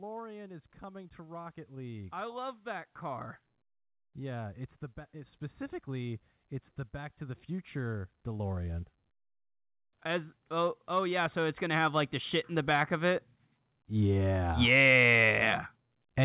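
From 0.8 to 3.32 s, automatic gain rising lifts the level by about 5 dB. The gain control judged the input too quiet. Voice and background swell together. It happens again from 10.03 to 13.23 s, rising about 6 dB, through a telephone-band call path.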